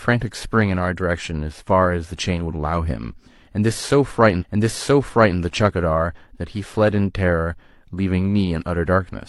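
Speech clip. At 4.37 s it jumps back and replays about 0.98 s, a stream segment repeated until 5.34 s. The player queued that segment twice, leaving a small blip at the jump.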